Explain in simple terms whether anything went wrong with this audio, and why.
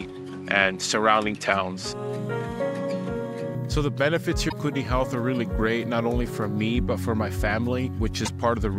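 For the first 3.55 seconds the sound is duller and boxier, with nothing above about 11.8 kHz and a faint layer of background noise. It then opens up with no gap or jump in loudness. The likely cause is an input switched to a poorer device, such as another microphone or headset, for the opening part.

Two brief glitches interrupt the sound, from 4.48 to 4.53 seconds and from 8.22 to 8.29 seconds. These come from damaged data in a compressed stream. The player misread the corrupted parts of the file and lost its place.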